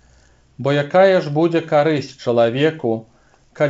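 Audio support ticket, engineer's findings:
No faults found; the signal arrives intact over a normally working WebRTC call path, its bandwidth ending at 7 kHz as expected for a G.722 wideband codec.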